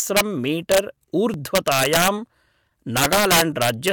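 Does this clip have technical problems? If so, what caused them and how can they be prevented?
Yes. Integer overflow: a gain or mixing stage pushed speech peaks past the largest representable integer, and instead of being limited they wrapped around to the opposite sign. Each overshooting peak jumps across the whole range, so loud syllables turn into harsh cracks far sharper than ordinary clipping. It happens at 0.17 to 0.21 s (about 2 dB over), 0.72 to 0.78 s (about 1 dB), 1.55 to 2.08 s (about 6 dB) and 2.97 to 3.89 s (about 9 dB), where the cracking is most violent. Using saturating arithmetic, or a limiter with enough headroom before the final integer conversion, would prevent it.

Repeated buffer: the playback device ran out of fresh audio and replayed its last buffer. Each repeat is about 2.9 ms long, which fits a 128-sample buffer, so the glitch is heard as a click or short buzz rather than a stutter. 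At 1.34 s the buffer plays one extra time. At 2.70 s it repeats four extra times, making a brief buzz. The audio resumes where it left off, so essentially nothing is skipped. A larger buffer or more reliable scheduling of the audio thread would prevent it.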